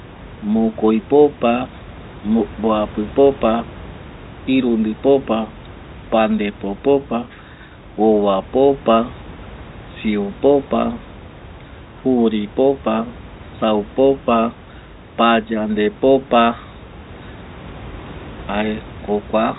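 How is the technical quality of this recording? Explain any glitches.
There are no glitches to explain in this recording. The room's background noise sits about 20 dB below the speech, and the G.711 telephone coding lets nothing through above 3.9 kHz, which gives the sound its narrow fixed-line band.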